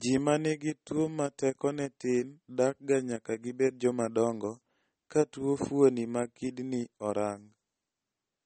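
Speech runs with plainly audible MP3 compression throughout, likely from a low bitrate around 32 kbps: nothing sounds above 8.4 kHz, and s sounds turn watery and swirly. A spectrogram shows a flat ceiling at 8.4 kHz with speckled, flickering gaps below it.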